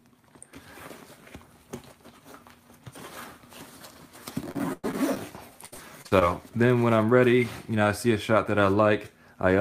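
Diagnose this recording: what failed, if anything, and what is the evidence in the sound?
The network stage failed, with repeated packet loss (robotic sound) in two bursts, from 4.51 to 5.18 s and from 5.66 to 6.23 s. Each burst is choppy, with a run of short holes, the longest about 105 ms in the first and 64 ms in the second. The receiver patched them by stretching the last good sound, covering roughly a quarter and a third of each span. Unlike buffer underruns, the holes are smeared continuations rather than clean silences, and they come in clusters rather than at a steady rate.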